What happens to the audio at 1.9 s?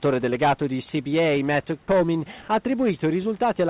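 Sound dropped by the voice detector, from 1.84 to 1.88 s, just before the moment asked about. For 40 ms the speech gives way to a short patch of steady, featureless noise, with about 30 ms of actual sound missing, before the speech returns. The likely cause is the sender's voice detector treating that stretch of sound as background and briefly stopping transmission, so the receiver filled the gap with comfort noise.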